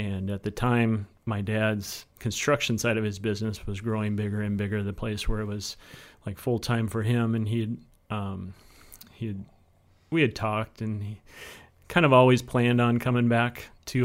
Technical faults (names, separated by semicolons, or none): none